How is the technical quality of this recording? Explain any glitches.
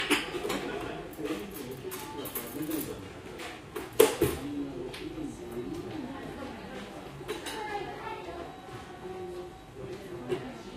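Listening to these everyday sounds, nothing stood out as a technical problem.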